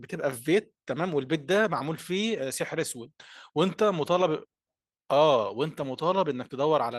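No technical faults are audible.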